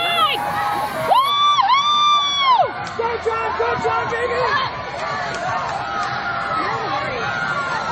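From 1.30 s onward, an adaptive stream at a lower bitrate cuts treble above 8.3 kHz and thickens artefacts; the switch is sudden and gapless, unlike a dropout.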